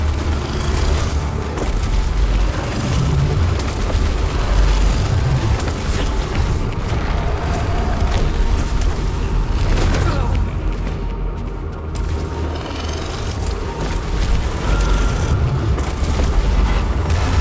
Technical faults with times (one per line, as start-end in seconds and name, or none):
none